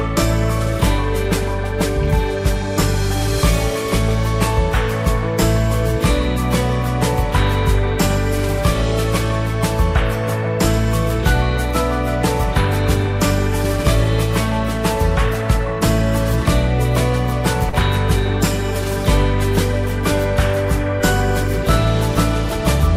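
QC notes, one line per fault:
17.69 to 17.75 s: short concealed packet loss. About 40 ms of the stream failed to reach the decoder in time, so the receiver extended the preceding sound to patch roughly 34 ms, then blended back into real audio, leaving a brief smear or wobble.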